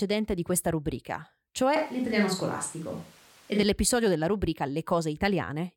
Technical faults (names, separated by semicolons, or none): switch to a distant microphone